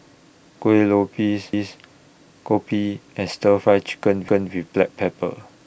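A speech clip with overlapping chunks. At 1.53 s and again at 4.28 s, a 250 ms stretch of speech plays twice. Each repeat runs for about a quarter of a second, ending at 1.78 s and 4.53 s. The audio was handled in 2.5 s chunks. Each new chunk began 250 ms before the previous one finished. So the tail of one block is heard again at the join, as a brief stutter.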